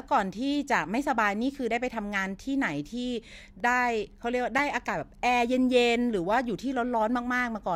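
Blocks of digital silence at 3.60 s and 4.58 s, about 0.7 ms and 2.9 ms long, fitting 32- and 128-sample buffers left unfilled, each heard as a tick or dip.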